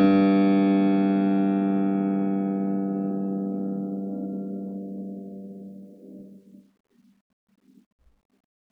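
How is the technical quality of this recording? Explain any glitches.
No glitches can be heard anywhere in this music recording. The technical quality holds steady throughout, with no fault to explain.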